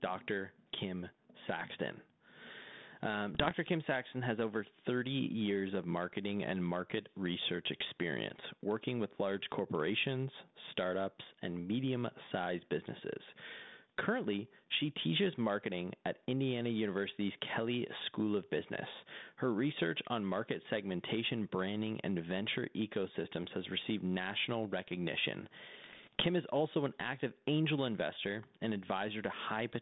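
Gain pumping runs through the whole speech clip, with a gain swing of roughly 10 dB. The likely cause is a fast limiter or compressor clamping a microphone gain set far too high.

Bit errors on an ADPCM link appear from 3.35 to 3.54 s, at a rate under one percent. Each flipped bit corrupts the decoder's step size and prediction, so the error rings on as rough, popping bursts with brief level jumps. Plain clicks from dropouts would end instantly. A second, heavier burst, at about one percent, runs from 25.84 to 26.25 s, between "has received national recognition" and "is also an active".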